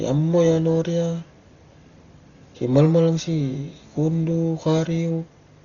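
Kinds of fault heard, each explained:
Dolby Digital compression: likely a starved AC-3 encode, around 32 kbps. The speech sounds dull, with nothing above 6.9 kHz, and rough, fluttering noise hangs around tones throughout.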